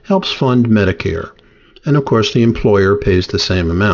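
Speech with aliasing throughout: sibilants sound gritty and metallic, folded back around 6 kHz, roughly 20 dB down, consistent with unfiltered downsampling to 12 kHz rather than simple dull band-limiting.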